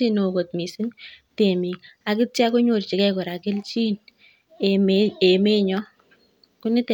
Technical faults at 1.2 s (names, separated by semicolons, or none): none